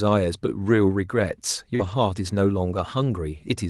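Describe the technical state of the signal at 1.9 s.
At 1.9 s the audio sits inside a lost packet rebuilt from error correction, running from 1.79 to 1.93 s. About 80 ms of sound, which fits four separate lost packets, was replayed from the low-bitrate Opus copies carried in the following packets, so there is no gap, but that stretch sounds rougher and noisier.

Immediately before, from 1.75 to 1.81 s, a short concealed packet loss covers a missing 40 ms. The decoder extrapolated the preceding sound to fill it and then blended back, leaving a brief smear or wobble that runs into the rebuilt section. Both sit on the Opus call path, whose band extends to about 12 kHz.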